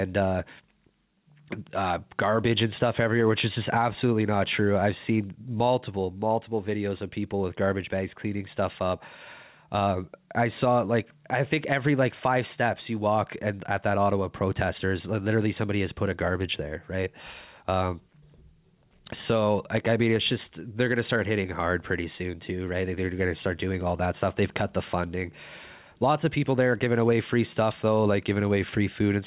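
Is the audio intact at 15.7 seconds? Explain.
No. At 15.7 seconds the speech shows gain pumping, present throughout the clip, with the level swinging around 10 dB. This is likely a fast limiter pulling back an over-high microphone gain. Unlike a noise gate, it turns the level down rather than cutting it to silence.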